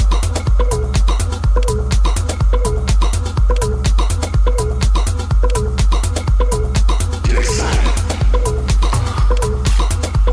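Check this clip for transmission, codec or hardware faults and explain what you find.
Nothing in this recording points to any fault.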